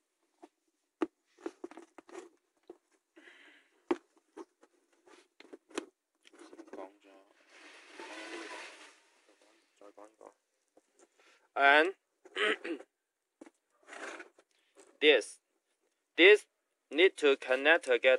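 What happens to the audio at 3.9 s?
Nothing goes wrong at 3.9 s; the audio plays through that moment intact, with no dropout, click, distortion or other fault to be heard.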